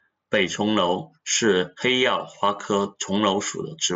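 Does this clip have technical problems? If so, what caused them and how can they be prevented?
No technical faults; the speech comes over a Bluetooth mSBC headset link, so its band stops near 7.8 kHz, as that wideband headset codec dictates.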